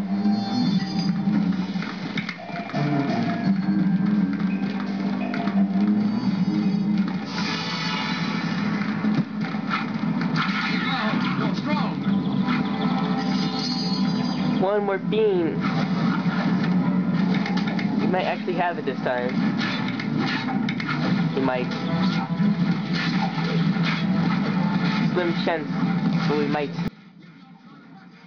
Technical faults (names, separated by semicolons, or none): one channel inverted